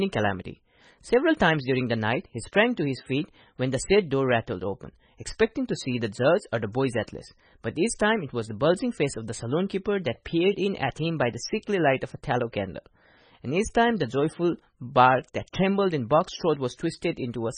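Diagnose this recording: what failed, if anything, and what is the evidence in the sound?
The codec stage is the likely failure point, specifically heavy MP3 compression applied across the whole recording. Throughout the speech, nothing is present above 9.3 kHz, a hard treble cut-off that an encoder starved of bits imposes. The damage points to a very low bitrate, around 19 kbps. With so few bits, quiet frequency components drop in and out from frame to frame, giving the speech a watery, swirling texture and smearing its sharper onsets.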